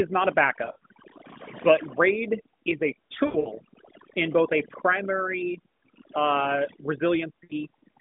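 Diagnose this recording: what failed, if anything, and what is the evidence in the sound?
Overdone noise removal in call processing: the background drops and breaks up into twinkling specks, and quiet parts of the voice are lost as quiet bands get gated away.

Lost AMR speech frames on the network link: dips and warbles after "not a" (0.66–0.84 s), after "raid is a" (3.26–3.52 s), and at 7.44–7.53 s, where the decoder repeats earlier frames with fading gain.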